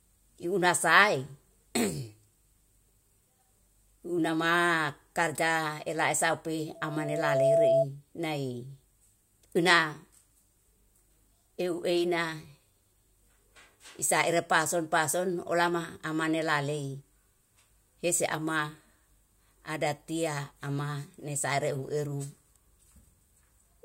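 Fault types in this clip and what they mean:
loudspeaker feedback squeal: a microphone picks up the loudspeaker it feeds, and at one frequency the loop gain exceeds one, so that tone keeps reinforcing itself. Just after "karja ela usaupi", a single tone near 663 Hz swells over roughly 0.7 s until it sits about 5 dB above the speech, lasting from 6.75 to 7.86 s. A steady hum or interference whistle holds a constant level throughout, but this tone rises out of nothing and then ends.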